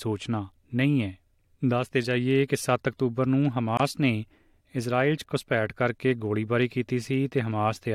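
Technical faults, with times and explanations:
3.77 to 3.80 s, gap at a join of encoded pieces: the speech just drops out for about 24 ms, with softened edges, then picks up right where it left off. Two separately encoded chunks were butted together, and the encoder's start delay and end padding were left in.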